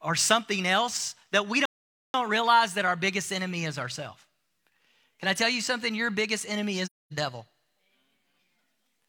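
The player likely ran short of data or was blocked at 1.65 s, after "something else that we", causing a playback stall: silence for about 0.49 s before "realize that our biggest" resumes. At 6.85 s, after "biggest enemy", AAC frame loss with muting zeroes the decoded spectrum, fitting a run of several lost frames. This leaves a soft-edged 0.26 s hole, ending at 7.13 s.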